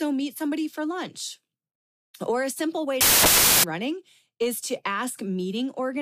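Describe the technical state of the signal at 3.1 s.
At 3.1 s you're inside a stretch of samples built from the wrong bytes, running from about 3.01 to 3.64 s. The bytes of each sample get assembled wrongly, so the jittery low bits end up dominating, and the speech turns into loud, harsh broadband noise for that span.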